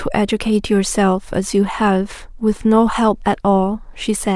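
No technical fault can be heard anywhere in the recording; the signal holds steady from its first moment to its last.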